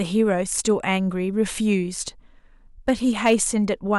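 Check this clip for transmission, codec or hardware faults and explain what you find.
Two stretches of hard clipping are present. From 0.53 to 0.94 s the speech is driven about 3 dB past what a stage can pass, and from 2.89 to 3.43 s about 5 dB past it, so the peaks are sheared flat. The flattened tops add high harmonics, heard as crackle on the loudest syllables, rougher in the second stretch.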